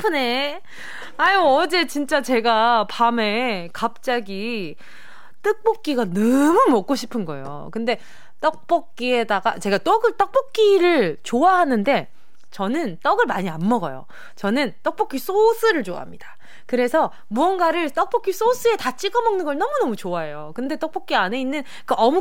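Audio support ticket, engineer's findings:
No audible change in tone; speech sounds normal by ear. DC offset present throughout, constant, about -33 dBFS. Waveform sits off zero, wasting headroom, with steady energy at 0 Hz. Probable component: capture front end or converter bias. Fix: high-pass or DC-removal filter.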